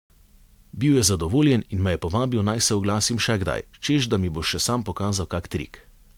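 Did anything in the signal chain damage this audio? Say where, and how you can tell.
No, nothing in the chain from capture to playback shows damage that can be heard in this speech recording.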